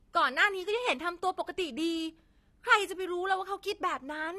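Speech with AAC compression damage throughout. Nothing sounds above 13.4 kHz, so the top is dull. Sibilants and held sounds warble and fizz. This is likely AAC-LC at a low bitrate near 32 kbps, with coarse quantisation.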